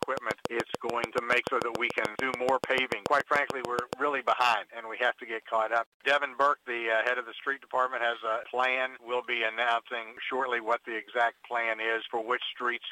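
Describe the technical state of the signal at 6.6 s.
At 6.6 s the signal is intact, with no dropout, distortion or other audible fault at that point.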